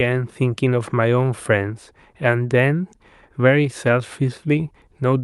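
No technical faults can be heard in this speech recording.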